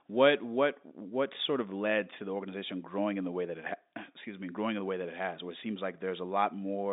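No technical faults can be heard anywhere here.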